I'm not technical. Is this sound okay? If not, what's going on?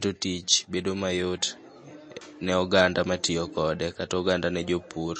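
No, not quite. All the way through, the speech sounds plainly watery and swirly, and there's no crisp treble at all above about 8.4 kHz, so s sounds lose their sparkle. That's likely heavy MP3 compression squeezing the file too hard.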